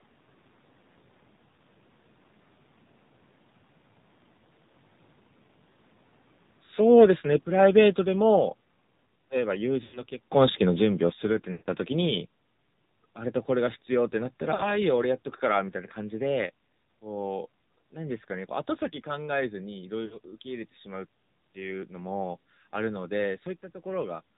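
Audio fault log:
throughout: AMR narrowband mobile codec. The speech went through AMR-NB at about 7.4 kbps, which models the vocal tract with a few pulses per subframe and samples at 8 kHz. Nothing above 4 kHz survives, and the low rate leaves the voice plainly buzzy and synthetic.
9.84–10.00 s, 11.52–11.68 s, 14.54–14.78 s, 20.06–20.18 s: lost AMR speech frames. Runs of 100 ms, 140 ms, 60 ms and 60 ms of frames failed, so the decoder repeated the last pitch and vocal tract settings at falling gain. Each gap is heard as a drawn-out, fading warble before the voice returns weak or rough.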